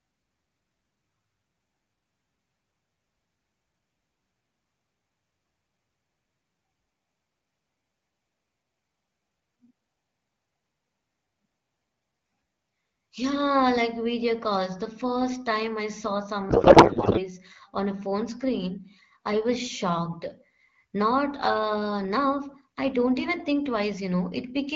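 At 16.49 s, after "first time I saw", a codec payload misread sets in. The speech becomes garbled noise and warble that barely follows it. The decoder is reading AMR-WB fields from the wrong positions, likely octet-aligned frames read as bandwidth-efficient. Clean decoding resumes at 17.25 s, before "on a phone".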